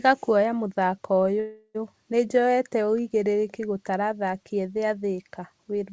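It's a speech clip carried over a call link, and right after "kũoya mũthako" there's a call audio freeze from about 1.40 to 1.77 s. The last bit of sound gets stretched into a fading buzz for roughly 350 ms, with about 40 ms of actual silence, and then the talk picks up exactly where it left off, nothing lost, just everything after it pushed about 350 ms later. That's likely packets stalling in transit and the jitter buffer running dry. The G.722 coding at 64 kbps also means there's nothing above 8 kHz.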